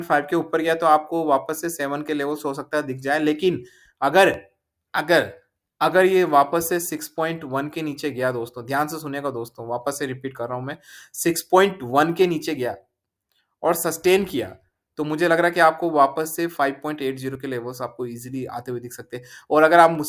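Listening closely, nothing in the audio stood out as a technical problem.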